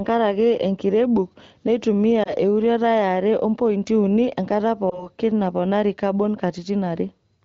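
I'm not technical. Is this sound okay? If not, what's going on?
No. There are two short glitches called lost AMR speech frames. The first comes at about 2.23 to 2.33 seconds, just after "enkirebuk neitumia". The second is at about 4.89 to 5.09 seconds, between "are ompointi uni enkata" and "naponari kabon". Each sounds like a brief dip or warble in the speech. Radio errors spoiled a tiny slice of the phone signal, roughly one 20 ms piece. The phone's decoder filled the gap by repeating the last good sound, fading it down.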